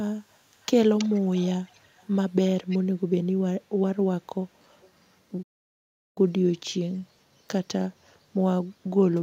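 From 0.88 to 2.17 s a faint second copy of the speech trails the original by 325 ms, about 25 dB down. It returns briefly at 2.69–2.79 s, a little louder, and at 4.81–4.91 s, barely audible. This is an echo leak, likely from a far end on loudspeaker whose echo canceller let part of the signal back. Unlike room reverberation, which smears into a smooth decay, this is a distinct delayed repeat at a fixed lag.

From 5.42 to 6.18 s the sound cuts out in mid-flow for 735 ms. This is a playback stall, most likely the player starving for data or its output thread being blocked. What sets it apart from packet-loss dropouts is its length: packet loss leaves short gaps or concealed patches of tens of milliseconds, while this is one long, clean hole in the audio.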